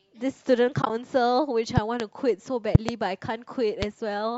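From 0.82 to 0.90 s, AAC frame loss with muting leaves brief soft-edged gaps. About 50 ms drops out across 80 ms, in short runs.

Loud pops follow, likely from an electrical transient. Two sharp pops come at 1.77 to 2.02 s, about 15 dB above the speech. Two more, about 25 dB above, come at 2.75 to 2.91 s. A single pop, about 15 dB above, lands at 3.82 to 3.85 s. The speech continues underneath each one.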